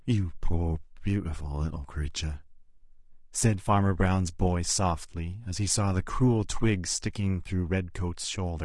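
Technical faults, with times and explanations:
Throughout, low-delay AAC compression: the speech sounds rough and grainy, with noise between harmonics, likely from AAC-ELD at around 32 kbps, whose short frames resolve pitch poorly.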